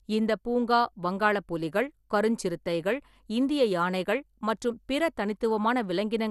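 From start to finish the speech has plainly audible coding damage, with nothing above 12.2 kHz, which points to MP2 compression at a low rate, likely around 80 kbps. The sub-band coder has run short of bits, so it shuts off the upper bands entirely and quantises the remaining ones coarsely. The result sounds dull and muffled at the top, with a gurgling, granular roughness that clings to the voice as bands switch in and out.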